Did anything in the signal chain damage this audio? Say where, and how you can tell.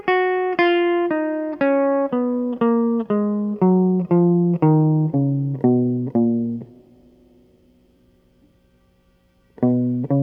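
No, nothing in the chain has left a mark on this music that I can hear, so there's no stage to point at.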